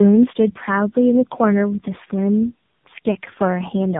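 Speech runs through three speech codecs in a row for the whole clip, a case of tandem speech coding. Each stage recodes the previous one's damage, so the voice comes out rougher, duller and more warbly than any single narrowband codec would leave it. Nothing reaches above 3.8 kHz. The compounded artefacts, rather than one codec's clean band limit, set it apart from a single low-rate link, and the sound fits an ADPCM stage followed by two AMR-NB passes.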